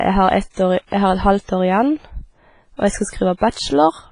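Throughout the speech the sound carries heavy transform-codec damage, most likely from WMA compression. Nothing is present above 10.3 kHz, and the remaining band rings and sounds washy, with a hiss that rises and falls with the level of the speech. The coarse quantisation and the zeroed weak components fit a low bitrate of around 24 kbps, where the encoder leaves too few bits to keep quieter detail.

Pre-echo appears three times. The first is at 0.87 to 0.92 s, just after "år i", and spreads over 56 ms. The next two both follow "og jeg skal": one at 3.37 to 3.41 s, spreading 39 ms, and another at 3.50 to 3.54 s, spreading 36 ms. In each case a sharp onset falls late in a codec block, so noise sized for the loud part also fills the quiet gap just before it. The result is a brief hiss ahead of each attack and a softened, smeared onset.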